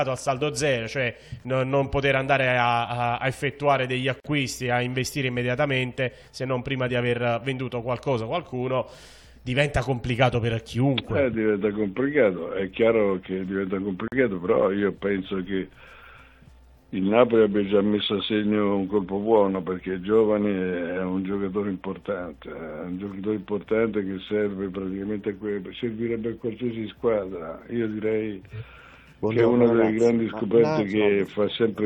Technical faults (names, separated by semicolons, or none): gap at a join of encoded pieces